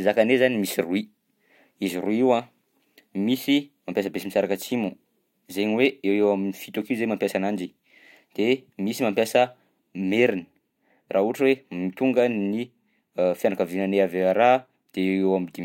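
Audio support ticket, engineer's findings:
No audible faults in the speech signal: level, continuity and timing stay steady throughout, with nothing pointing to a fault in capture, processing or playback.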